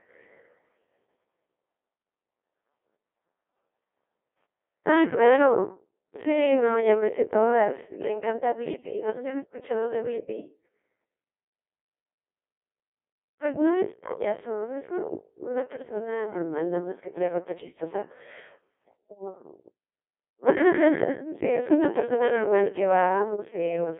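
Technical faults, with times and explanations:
Throughout, Codec 2 vocoder: the speech is heavily robotic and buzzy, resynthesised from sine waves at what sounds like about 1.2 kbit/s. Only 300 Hz to 3.5 kHz survives. A spectrogram is blank above 3.7 kHz and shows smeared harmonic stripes, and the waveform no longer matches natural speech.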